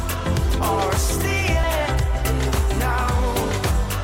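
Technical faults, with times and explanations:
0.21–3.93 s: clock slip clicks, faint ticks roughly every 0.15 s, evenly spaced unlike random dropouts, likely single-sample slips between unsynchronised clocks about 200 ppm apart.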